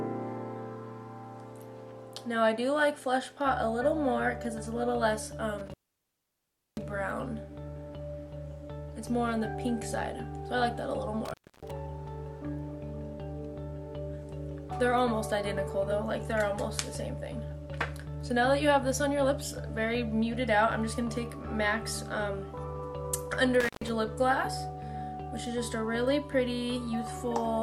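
An intermittent contact breaks the signal at 5.58 s, 11.25 s and 23.60 s. A loose plug or cable opens briefly. The sound cuts out for about 1.03 s, 0.29 s and 0.13 s. Crackle marks each edge, and faint hiss fills the gaps.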